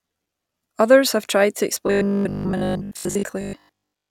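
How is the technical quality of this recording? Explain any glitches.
The recording has one clear glitch: from 1.87 s, just after "have tried to", to 4.09 s, the speech becomes a rigid 50 Hz metallic buzz. This is robotic sound from repeated short buffers, likely from audio arriving too seldom so that each 20 ms chunk is replayed, with most of the real sound skipped. Unlike dropouts, there are no silent gaps, and the fixed pitch still loosely tracks the words.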